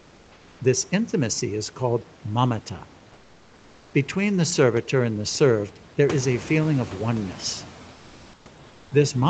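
A speech clip with two problems on a call path. A noise suppressor runs throughout, pulling down the bands it judges to be steady noise by about 14 dB, so the background dips between phrases and swells under them. The room noise climbs around 6 s. During the pauses at 0.0–0.59 s, 3.13–3.93 s and 8.67–8.91 s, comfort noise stands in for the background, likely from Opus discontinuous transmission, replacing the real room sound with a smooth, featureless hiss about 2 dB quieter.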